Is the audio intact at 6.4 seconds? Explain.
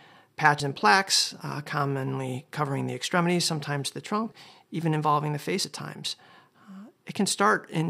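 Yes, the audio is intact at 6.4 seconds, with no dropout, click, distortion or other fault to be heard at that point.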